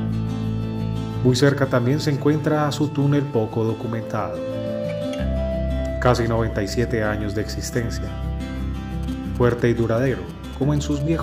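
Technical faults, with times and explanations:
9.03 to 11.02 s, GSM signalling bursts: a galloping dit-dit-dit run of brief buzzes sits under the sound, roughly 25 dB below it. A nearby 2G phone is sending short groups of radio bursts while signalling, not a steady transmission. Some circuit in the audio path rectifies that radio energy into audible pulses. The buzzes carry the burst repetition rate of about 217 Hz, which gives them their hard, rasping tone.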